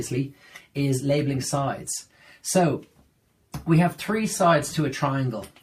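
Nothing here stands out as a technical problem; the audio runs along without any audible glitch or disturbance to point to.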